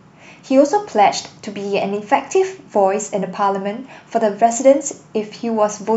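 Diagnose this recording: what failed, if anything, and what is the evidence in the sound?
Nothing failed; no faults heard.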